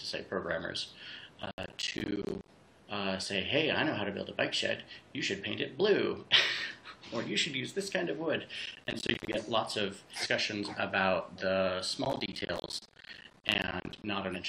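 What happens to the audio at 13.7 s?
At 13.7 s the audio is inside a burst of processor overload crackle running from 12.05 to 14.04 s. Missed buffers of around 10 ms drop to silence. This leaves a gritty, tearing crackle.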